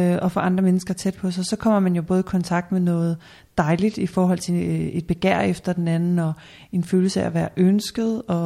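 No technical faults can be heard anywhere in the speech.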